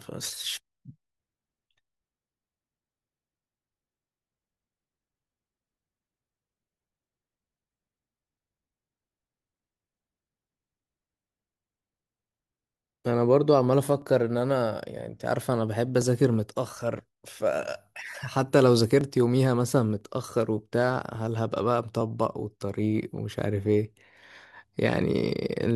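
From 1.04 s to 25.02 s, periodic USB or driver dropouts recur every 1.0 s. At each one, roughly a millisecond of audio is skipped as the bus or driver stalls, leaving an evenly spaced tick wherever it falls during speech.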